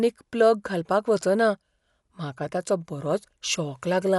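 A low-bitrate encode, likely Dolby Digital compression, runs through the whole clip. At a rate that fits roughly 64 kbps, the encoder narrows the band and starves many frequency lines of bits, so the decoder fills those gaps with noise. The speech loses everything above 11.4 kHz and sounds dull, and a plainly audible rough, fluttering grain clings to its voiced tones from start to finish.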